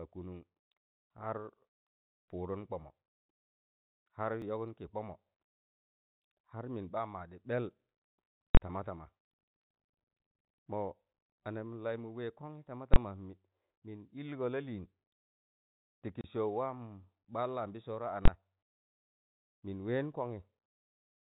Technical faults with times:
4.42 dropped buffer (overrun)
8.55-8.57 invalid numbers at full scale
12.94-12.96 invalid numbers at full scale
16.21-16.24 packet loss filled with silence
18.25-18.28 invalid numbers at full scale

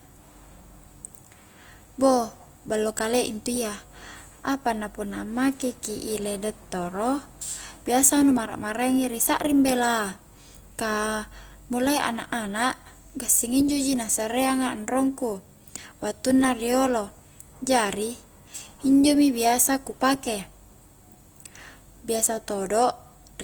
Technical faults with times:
0.00-23.44 Opus compression

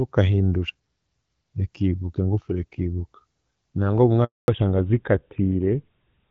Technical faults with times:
4.24-4.48 handover gap
4.48-6.31 fallback to narrowband

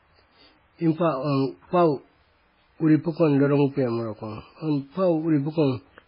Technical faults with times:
0.00-6.07 MP3 compression

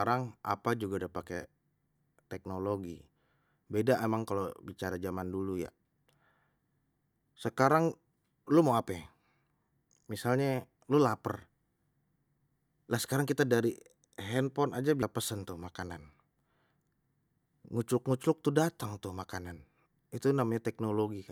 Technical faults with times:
15.02 compressed frames skipped

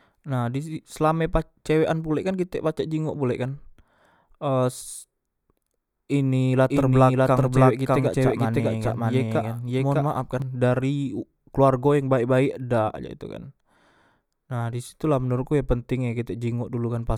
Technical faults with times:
6.70-10.42 doubled audio track

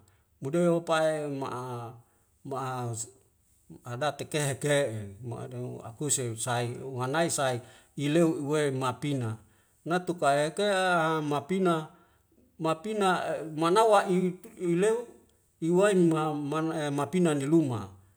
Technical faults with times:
none

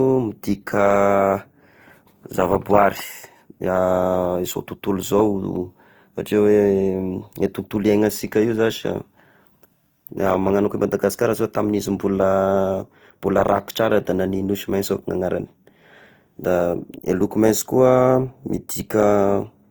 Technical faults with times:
0.00-19.71 Opus compression

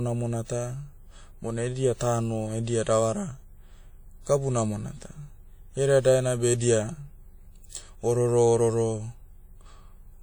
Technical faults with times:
0.00-10.23 WMA compression

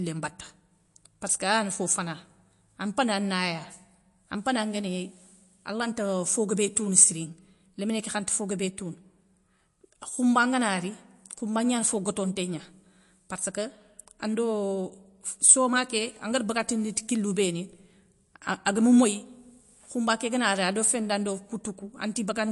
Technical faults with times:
0.00-22.51 MP3 compression

